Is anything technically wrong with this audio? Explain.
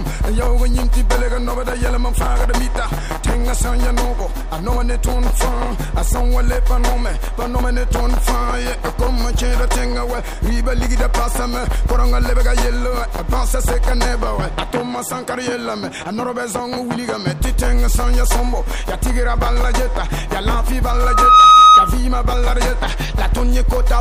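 Yes. From 20.89 to 21.99 s there is loudspeaker feedback squeal: a microphone re-captures its own loudspeaker, and at 1.3 kHz the loop gain tops one, so a pure tone swells over about half a second to roughly 10 dB above the sound. On a spectrogram it is a bright horizontal line, and the waveform envelope balloons.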